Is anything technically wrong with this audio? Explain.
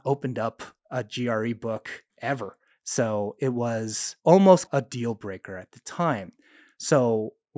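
No, nothing technically wrong stands out here; this speech recording comes across without any faults worth pointing to.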